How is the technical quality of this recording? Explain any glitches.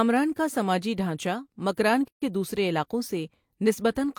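There's one clear glitch in this speech recording, a gap at a join of encoded pieces. At 2.08 s, right after "کا سماجی ڈھانچہ مکران", the sound drops out for about 137 ms and picks up again at 2.22 s with "دوسرے علاقوں". It sounds like two separately encoded chunks were butted together without trimming, so the encoder's start-up delay and last-frame padding stayed in. You hear a brief hole with smeared edges, then the speech continues as if nothing happened.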